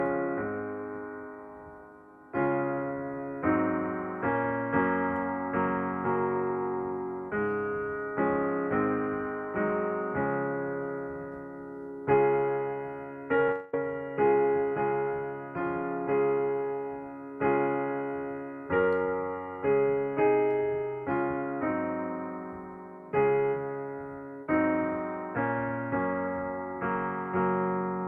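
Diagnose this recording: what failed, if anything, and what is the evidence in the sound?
Network stage: short concealed packet loss at 13.47 to 13.49 s. About 10 ms went missing, and the decoder extrapolated the preceding sound, leaving a brief smear.

Network stage: from 13.51 to 13.74 s, about 0.2 s of sound is replaced by a fading synthetic continuation, likely a long network dropout that concealment bridged without reaching silence.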